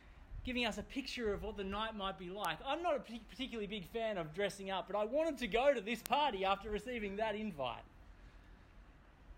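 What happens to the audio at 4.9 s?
At 4.9 s the audio sits inside a run of word clock ticks lasting from 0.28 to 8.95 s. The receiving device is running on its own clock, drifting a few tens of parts per million from the sender's. Each time the two clocks slip past each other, a few samples are misread and one sample is dropped or repeated. The result is around fifteen sharp ticks of uneven strength, recurring roughly every 0.7 s.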